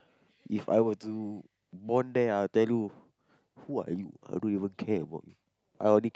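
Nothing stood out as a technical problem on listening to the speech.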